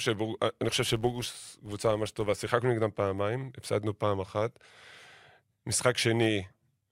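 Between 0.69 and 2.52 s, a filter restarted on every block buzzes at 86 Hz, fitting 512-sample blocks; unlike steady hum, it swells with speech.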